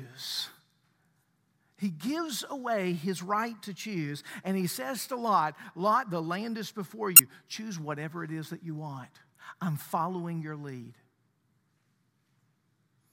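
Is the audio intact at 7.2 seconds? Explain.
No. Damaged data in a compressed stream hits from 7.16 to 7.20 seconds. Corrupted bytes there leave the decoder unable to read its frames. It loses sync and hunts for the next valid header. The result is a brief chirp, click or short hole in the speech.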